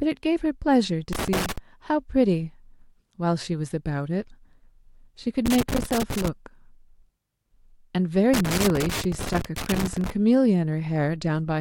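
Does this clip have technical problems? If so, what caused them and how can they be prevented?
Yes. A worn or dirty contact in a cable connector was making and breaking as it moved. Each interruption chopped the speech signal, and any DC on the line turned the breaks into pops. The result is loose connector crackle: irregular bursts of scratching from 1.13 to 1.58 s, 5.46 to 6.28 s, and 8.34 to 10.10 s, the last burst running nearly two seconds. Clean or replace the connectors, secure the cables so they cannot flex at the plug, and remove any DC offset from the line.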